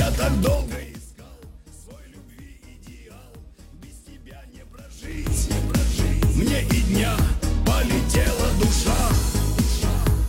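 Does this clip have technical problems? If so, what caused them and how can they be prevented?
Yes, there's zipper noise from 0.51 to 1.07 s as the level drops roughly 25 dB, and from 4.88 to 5.39 s as it comes back up. The gain moves in 3 dB jumps, about fifteen a second, and each jump ticks. To prevent it, ramp the gain per sample or smooth it.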